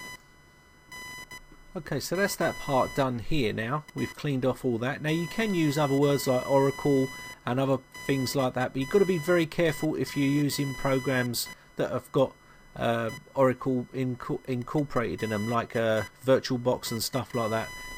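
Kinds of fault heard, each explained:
Computer activity noise, throughout the clip: a buzzing, chirping layer sits under the sound from start to finish, pulsing at a rate of around 1 kHz and roughly 20 dB below the wanted signal. It tracks the computer's workload rather than the audio itself. Shifting current draw from the processor, graphics card or mouse disturbs the ground that the audio circuit shares with them, so that activity leaks in as a whine.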